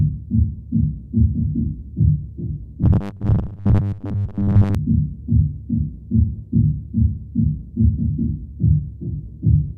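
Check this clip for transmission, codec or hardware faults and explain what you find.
One fault turns up, between 2.83 and 4.75 s: robotic sound from repeated short buffers. The sound hardens into a rigid, metallic 100 Hz buzz that only loosely tracks the underlying audio. Likely cause: audio arriving too seldom, so roughly 10 ms chunks are replayed in place of most of the real signal, which fits the 100 Hz pitch.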